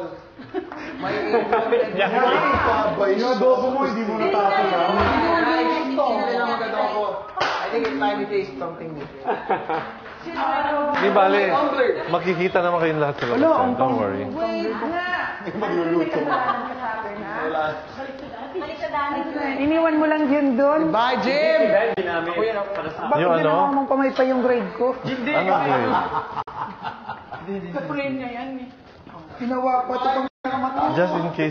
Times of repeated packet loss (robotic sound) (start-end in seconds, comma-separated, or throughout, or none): none